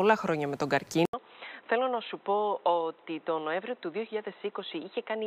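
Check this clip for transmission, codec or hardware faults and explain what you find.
One fault is present: the input appears to have switched to a poorer device. At 1.05 s the sound breaks into about 80 ms of silence, then continues to the end with nothing above 4 kHz, a level a few decibels lower, and a new background noise roughly 30 dB under the signal. The likely cause is the system moving capture to another microphone or a headset call profile, whose narrower band and own noise leave the audio dull and boxy.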